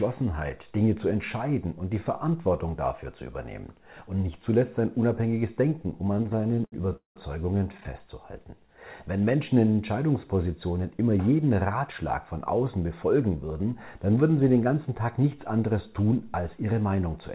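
Audio carried over a call path with nothing above 4 kHz, which fits narrowband G.711 A-law at 64 kbps, drags and stutters from 6.12 to 7.18 s and again from 7.58 to 7.89 s. This is repeated stalls (stutter): packets arrived late, the jitter buffer kept running dry, and the receiver stretched and faded the last sound to fill the gaps, up to 193 ms long, with nothing lost.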